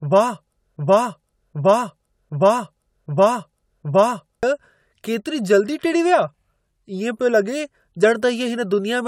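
From the start, the speech carries generation loss: a swirly, hollow, smeared quality, with consonant attacks softened more than a single pass at 96 kbit/s would explain. The likely cause is the audio being run through AAC-LC a few times, each pass requantising on a shifted frame grid so that noise and holes pile up. On a spectrogram the upper bands look patchy and speckled, with gaps flickering frame to frame and nothing above 20 kHz.

From 0.77 s to 4.43 s there is a broken-record loop: the same 765 ms fragment plays five times back to back, identical each time, and the speech that belonged in that stretch never arrives. This likely comes from a player, encoder or stream stalling and resending the last chunk it held. The waveform shows one shape stamped out repeatedly at a fixed spacing, and the spectrogram shows the same pattern repeating side by side.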